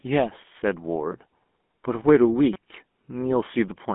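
Throughout, the GSM full-rate codec's pulse-driven vocal-tract model gives the speech a buzzy, gravelly roughness. On a spectrogram the band sits between 200 Hz and 3.5 kHz, empty above 3.8 kHz.

At 1.12 s, and again from 2.53 to 2.56 s, a repeated buffer causes a click or brief buzz: a tiny 5.3 ms slice, fitting a 128-sample buffer, replays identically. The waveform shows copied cycles with hard joins, and about 10 and 20 ms of audio are lost.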